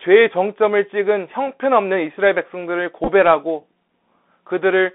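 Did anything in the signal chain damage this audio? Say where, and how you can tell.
Yes. The whole clip has passed through the Bluetooth CVSD headset codec. That is the codec stage. The speech sits in a narrow band, roughly 200 Hz to 3.6 kHz, with nothing above. That points to the narrowband headset link, which fits a 64 kbps one-bit stream. CVSD sends only up or down each sample, with an adapting step. Fast, bright sounds outrun that step. So s sounds turn scratchy, and a granular hiss sits under the speech. The damage is plainly audible.

There is also a Bluetooth headset packet repeated fault on the wireless link between headset and phone. It falls from 3.04 to 3.08 s. Packets were lost across about 37.5 ms, with 22.5 ms of audio missing in total. The chip filled each gap by decoding the previous packet's bits again. The longest unbroken run is only about 7 ms. So you hear a brief rough, buzzy flutter near 267 Hz, the 3.75 ms repeat rate, rather than a sustained tone.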